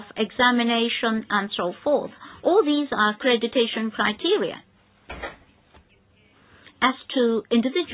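No faults present; the audio carries a telephone-band call path with nothing above 4 kHz, consistent with 64 kbps G.711 mu-law coding.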